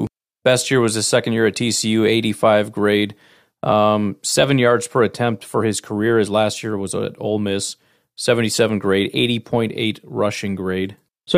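No technical faults can be heard anywhere in the speech recording; the signal stays continuous and steady throughout.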